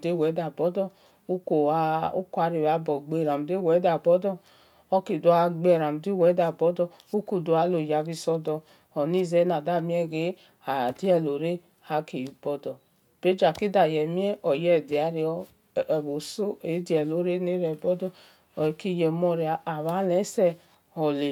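Listening through the speech recording, nothing stood out as a technical fault at any point.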